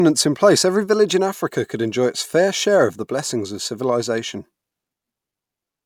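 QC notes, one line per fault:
No technical faults are audible; the signal stays continuous and steady in level, with no interruptions or distortion anywhere in the clip.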